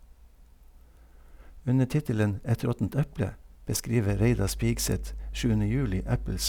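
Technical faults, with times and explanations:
4.10 to 6.49 s, mains hum: a steady low drone at 50 Hz enters partway through the speech and continues to the end of the clip. It is fairly strong, sitting only about 10 dB below the speech, so it is plainly audible beneath and between phrases. The constant pitch at the power-line frequency points to electrical interference, where a ground loop or a nearby transformer couples the mains supply into the signal path.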